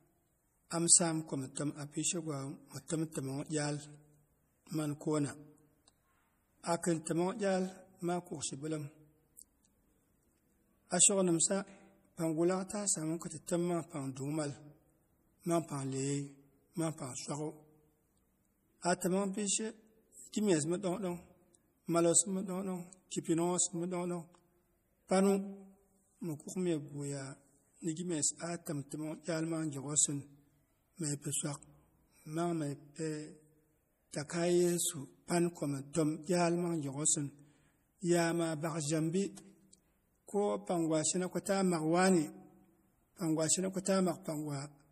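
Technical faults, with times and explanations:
Throughout, MP3 compression. The audio has nothing above about 15.1 kHz, and the coding damage is plainly audible. The likely cause is a lossy MP3 encode, and the sound fits a low bitrate near 40 kbps. With so few bits, the encoder drops the top of the spectrum at a fixed cut-off. It also discards weak frequency detail that flickers between frames. Speech sounds watery and swirly, and sibilants turn metallic and chirpy.
28.66 s, pre-echo. A short hiss comes just before a sharp onset in the speech and lasts about 15 ms. The codec spreads its quantisation noise across a whole transform block. Here the attack lands late in that block. Noise sized for the loud attack therefore also fills the quiet moment ahead of it. The onset loses its crispness and sounds softened and smeared.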